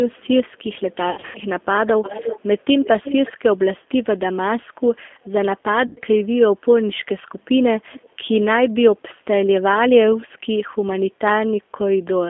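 Speech, and the whole thing has the narrow, slightly gritty, synthetic quality of the G.729 codec. The line band runs only from about 250 Hz to 3.5 kHz, and the roughness is plainly audible, which fits G.729A at 8 kbit/s. That codec doesn't send the waveform. It rebuilds each 10 ms frame from a vocal-tract filter, a pitch predictor and a handful of pulses, so consonants lose their edge and everything sounds a bit manufactured.

There's VoIP packet loss concealed by the speech codec twice. The first runs from 1.1 to 1.39 s, with about 180 ms missing, scattered across roughly 240 ms. The longest single gap is 90 ms, and the pattern fits six lost 30 ms packets. The second runs from 5.87 to 6.0 s, with 90 ms missing, which fits three packets. In both spots the decoder keeps extending the last pitch and filter while turning the gain down. You get a stretched-out buzzy tone or coloured noise that fades, and the sound stays weak for a moment after the real audio resumes, because each frame builds on the one before.

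Between 2.59 and 2.64 s there's a very faint scrap of delayed sound, about 360 ms behind the original and far below the speech level. That's an echo leak, likely from a loudspeaker on one side whose echo canceller let a bit of the signal back through.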